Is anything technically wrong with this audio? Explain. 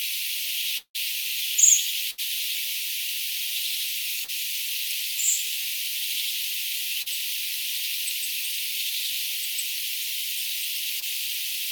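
Yes. The audio has three kinds of transmission fault.

From 0.77 to 0.96 s there is a long network dropout. The audio stretches into a fading buzz or hiss, then goes silent for about 100 ms. It resumes further on. About 180 ms is lost, likely because no packets arrived for that stretch.

From 2.10 to 2.20 s there is a burst of packet loss. About 80 ms never arrived in time. The receiver held the last sound for about 74 ms and turned it down. This gives a brief fading buzz or hiss, then a jump ahead.

Short concealed packet loss occurs at 4.24 to 4.30 s, 7.02 to 7.08 s and 11.00 to 11.04 s. Each gap is 20 to 40 ms. The decoder bridged each gap by extending the preceding sound and blending back in. Each one is heard as a quick smear or wobble.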